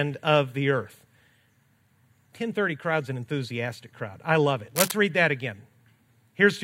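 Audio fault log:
4.75 to 4.92 s, cable scratch noise: after "crowd I love it" and before "read that again", a dense, ragged burst of scratchy rustling sits over the speech at roughly the same loudness, likely a worn connector shifting its contact, unlike a clean click's single sharp transient.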